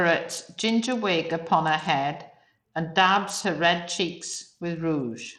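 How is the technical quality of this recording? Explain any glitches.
The technical quality is compromised throughout by plainly audible coding damage. From start to finish the speech has a gritty, grainy edge, with treble that thins out and flickers. This is most likely Bluetooth SBC compression at a starved bit pool, which fits a bitrate near 80 kbps. Given too few bits, the upper sub-bands drop out while the remaining bands are coarsely quantised. A spectrogram would show patchy, blinking high-frequency blocks above a ragged noise floor.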